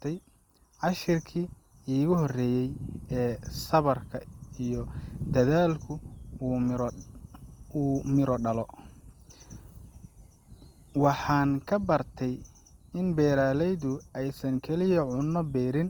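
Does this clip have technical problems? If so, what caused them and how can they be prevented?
Yes. The speech was likely passed through Opus compression in its music (CELT) mode at a rate that fits about 24 kbps. Short of bits, the encoder fills bands with folded or noise content, so throughout the clip the voice sounds plainly rough and grainy, though the band still reaches 20.2 kHz. Encoding at a higher bitrate, or with Opus tuned for speech, would prevent this.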